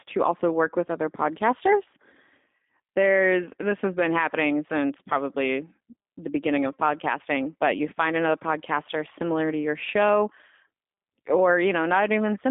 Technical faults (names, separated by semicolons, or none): G.729 codec